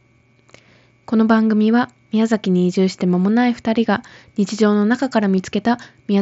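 At 5.36 s a brief buzzy smear lasting about 15 ms marks concealed Bluetooth headset packet loss: lost packets were patched with repeated recent waveform.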